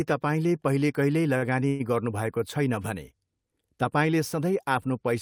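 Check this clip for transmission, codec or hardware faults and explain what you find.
Two transmission faults appear, both early in the speech.

At 1.37 to 1.44 s there is a short stall from a late packet. A packet arrived late and the jitter buffer ran dry. The receiver held the last sound for about 47 ms, then resumed where it stopped. Nothing is lost. One sound is stretched, with a slight buzz or dip.

At 1.68 to 1.82 s there is a call audio freeze. The sound is held for about 115 ms as a fading buzz or hiss and never drops to silence. It then carries on with nothing missing, 115 ms later than before. The likely cause is delayed packets emptying the jitter buffer.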